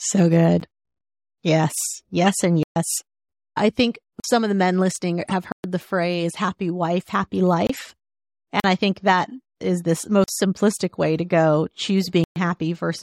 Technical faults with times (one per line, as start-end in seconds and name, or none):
0.60-0.63 corrupt frame decoded
2.63-2.76 block of digital silence
4.20-4.24 block of digital silence
5.25-5.33 corrupt frame decoded
5.52-5.64 block of digital silence
7.67-7.83 corrupt frame decoded
8.60-8.64 block of digital silence
10.24-10.28 block of digital silence
12.03-12.06 corrupt frame decoded
12.24-12.36 block of digital silence